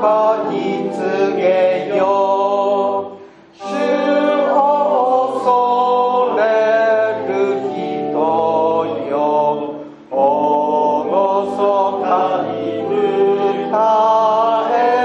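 No technical faults can be heard anywhere in the audio; the signal stays steady and intact throughout.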